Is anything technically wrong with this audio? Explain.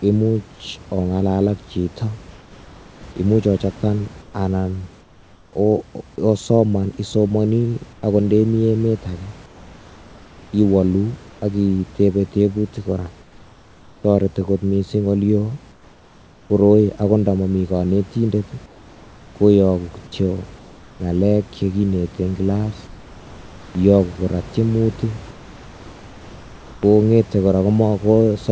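Yes. Comfort noise in place of the background appears in pauses at 2.31–5.53, 7.93–8.03, 9.46–11.42, 13.22–14.04, 15.72–16.50, 18.66–21.00 (after "ndo momi konetindet", before "ngalek chekinete en kilas"), 22.87–23.75 (after "ngalek chekinete en kilas") and 25.31–26.83 s. The likely cause is discontinuous transmission: the sender goes silent between phrases, and the receiver fills the gap with synthetic noise. The real room background becomes a flat, featureless hiss, in several of these pauses about 3 to 4 dB quieter.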